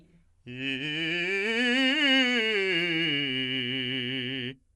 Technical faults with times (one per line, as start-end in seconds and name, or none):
0.00-4.75 Dolby Digital compression